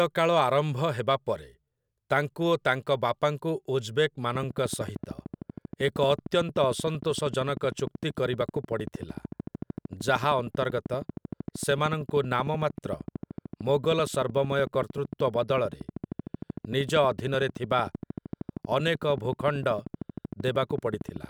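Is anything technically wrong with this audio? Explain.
Yes. From 4.35 s to 21.25 s a train of clicks runs over the speech: about two hundred pulses at a steady 13.1 per second, peaking roughly 10 dB above the signal. They sound like rapid ticking, audible in pauses too, likely from electrical interference or a faulty connection or power supply.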